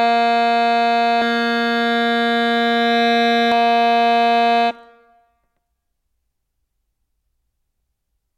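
Music clip with a doubled audio track from 1.22 to 3.52 s. A second full-band copy trails by roughly 150 ms at about equal level, likely from a slower capture path.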